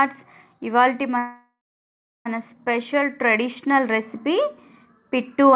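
From 1.18 to 2.27 s, a call audio freeze stretches the last sound into a fading buzz, then about 0.7 s of silence (likely delayed packets emptying the jitter buffer). The spectrogram shows a smeared decay and a blank gap under the 4 kHz ceiling.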